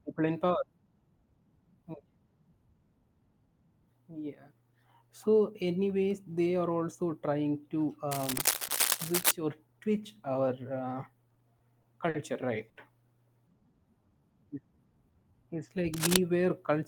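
Cable scratch noise at 8.11 to 9.31 s, ending just before "or twitch", and again at 15.94 to 16.17 s in this speech clip lays rustling bursts at roughly the speech level over the voice, likely from a worn cable or connector being moved. Repeated stalls (stutter) between 11.29 and 12.15 s come from five jitter-buffer underruns, together about 120 ms of stretched sound with the longest at 50 ms, so the speech drags and catches. A short stall from a late packet at 12.69 to 12.77 s holds one sound about 70 ms too long while the receiver waits, raising the delay by 70 ms. Jitter buffer slow-down from 13.42 to 15.84 s repeats pitch periods to rebuild its reserve, adding 237 ms so the speech runs at 91% speed without a change in pitch.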